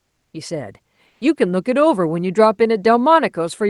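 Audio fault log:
0.01–0.33 s and 1.07–1.21 s, comfort noise in place of the background: in both pauses the real background, sitting about 56 dB and about 51 dB below the loudest sound, gives way to a flat, featureless hiss lacking the original texture. The first patch lasts 320 ms and is about 3 dB quieter; the second lasts 140 ms and is about 2 dB louder. This is likely Opus discontinuous transmission, where the receiver synthesises noise while the sender pauses, over a call path band-limited near 12 kHz.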